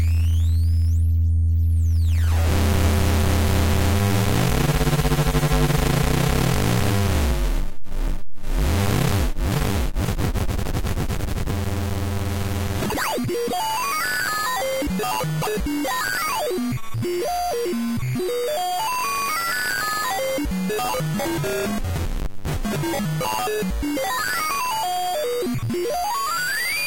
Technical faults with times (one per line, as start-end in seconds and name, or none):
none